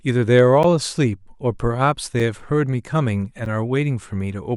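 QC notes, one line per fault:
0.63 s, 2.20 s, 3.45 s: block of digital silence. The speech drops out for 10.67 ms, 2.67 ms and 8 ms, consistent with missed 512- and 128-sample buffers. The gaps are short enough to be heard as ticks or dips, showing as flat waveform gaps and spectrogram slits.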